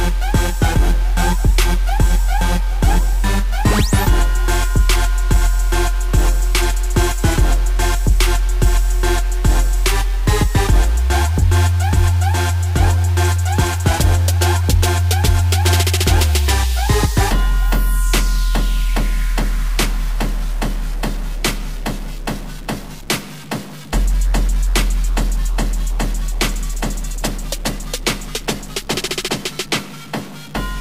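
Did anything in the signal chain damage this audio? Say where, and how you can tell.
Yes. A single data bit appears stuck, the likely result of a broken data line or a failing converter stage. Throughout the audio, roughly half of all sample values land off by one fixed step of about -35 dBFS, set by the waveform's own shape. That gives a harsh, buzzy distortion over everything, and because the stuck bit also flips with the sign of small values, quiet gaps fill with a gritty noise floor instead of falling silent.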